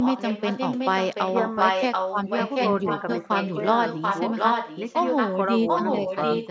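Speech with an echo leak: a copy delayed by 0.74 s runs from 0 to 5.38 s slightly below the voice, then from 5.67 s to the end at equal level, likely an echo canceller missing loudspeaker pickup.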